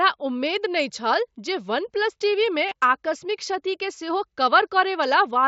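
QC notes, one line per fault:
2.69–2.71 s, concealed Bluetooth headset packet loss: a gap of about 22 ms, which fits three lost mSBC frames, is filled by repeating the closest-matching recent stretch of waveform. Unlike a plain dropout, level never falls to silence; instead a brief buzzy hold precedes a slight warble on recovery.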